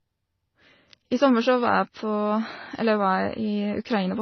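Throughout the speech, nothing reaches above 6.2 kHz, and two distinct kinds of coding damage sit on top of each other, the artefacts of both codecs heard together. This layering is the mark of transcoding between lossy codecs, likely an MP3 encode at a low rate re-encoded as HE-AAC. A single low-bitrate codec produces only one artefact signature, whereas here the second encoder has spent bits reproducing the first one's flaws.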